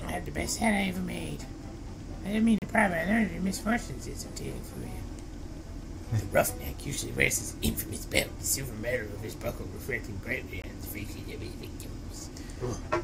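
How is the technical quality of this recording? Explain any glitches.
The recording has two short dropouts caused by a gap between stream segments. The first runs from 2.58 to 2.62 s and lasts about 36 ms; the second is a 20 ms hole at 10.62 s. At these two segment boundaries the timestamps leave a small gap, and the player fills it with silence. Both holes have hard edges and sound like brief clean cuts in the audio. Nothing is lost: the audio resumes where it stopped, slightly late. The 8-second spacing between them fits a 4-second segment length.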